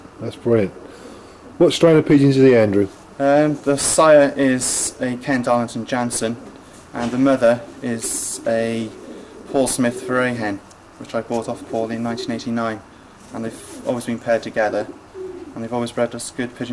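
No technical faults can be heard anywhere in this clip. Nothing in the audio calls for a timestamp or an explanation.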